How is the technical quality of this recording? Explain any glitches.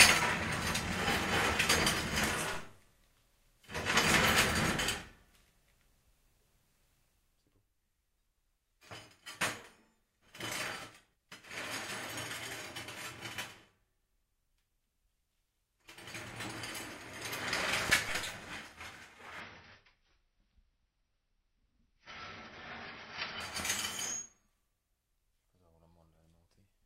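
The recording has three kinds of technical faults: two DC steps, three loud pops, and a four-second stretch of reduced stream quality.

DC steps at 2.54 s and 18.09 s: the waveform's zero line suddenly shifts, then drifts back as a roughly 2 Hz high-pass bleeds it away, producing a low thump each time.

Loud pops: two in quick succession between 17.90 and 17.97 s, peaking roughly 15 dB above the sound, and one at 23.60 s, roughly 10 dB above. These sharp transients, likely from a switch, plug or driver glitch, sit on top of the sound, which continues underneath.

Adaptive stream at a lower bitrate, 19.40 to 23.40 s: the stream abruptly switched to a leaner version, suggesting a drop from about 96 to 24 kbit/s AAC. Nothing remains above 6 kHz, so the audio sounds dull and carries codec artefacts, without any gap.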